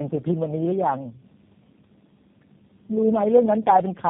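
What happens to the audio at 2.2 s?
At 2.2 s the speech carries tandem speech coding, present across the whole clip: it sounds like four speech codecs in a row, each re-encoding the last one's already degraded output. Nothing comes through above 3.5 kHz. What separates it from a single low-bitrate codec is the stacked damage, rougher, more muffled and more warbly than any one coder alone would leave.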